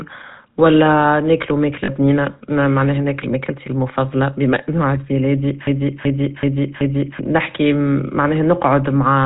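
The whole clip runs through a GSM full-rate codec. The vocal tract is modelled and driven by a sparse pulse excitation, so nothing gets through above 4 kHz and the speech has that plainly audible buzzy, gravelly roughness, which fits GSM's 13 kbps full rate.

At 1.84 s, right after "ولا ناكلو" and before "بنينة معناها ناكل ماكلتي", there are lost GSM frames. The decoder just repeated the last good frame's settings, so for about 40 ms there's a brief metallic ring. That fits two dropped frames.

From 5.67 to 7.19 s, just after "بما انو عبد ميلادي", there's a broken-record loop. A 0.38 s fragment repeats exactly, back to back, four times, and whatever should have played there is gone. It's likely a stalled player or stream re-sending its last buffer.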